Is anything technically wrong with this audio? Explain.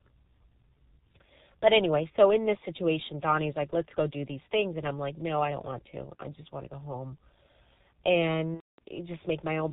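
Yes, there are two faults.

Throughout the speech, the G.723.1 codec is at work. It codes the audio in 30 ms frames, and the sound points to a rate near 6.3 kbit/s. Nothing above 4 kHz survives. The voice model updates slowly, so the speech sounds muffled and hoarse, with smeared consonants.

From 8.54 to 8.79 s, VoIP packet loss is concealed by the speech codec. About 240 ms of audio is missing, which fits eight lost frames. The decoder repeats its last pitch and filter at falling gain, so the sound stretches into a buzzy tone or coloured noise that fades.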